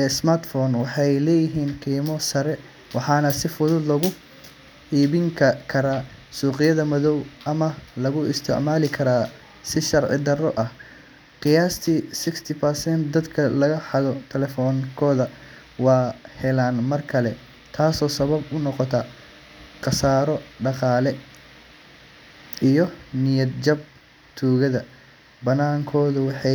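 Nothing here trips up the ear: the speech runs along without a single dropout, glitch or other technical hiccup worth pointing out.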